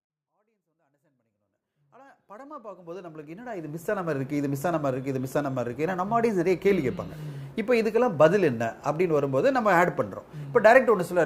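Nothing stood out on listening, as the audio simply rises in a smooth fade-in from the very opening to full level at about 4.26 s.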